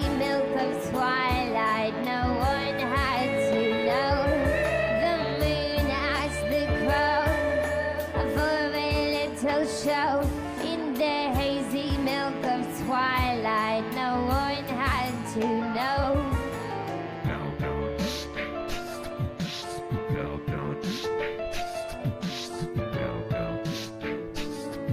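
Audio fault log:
No audible faults detected.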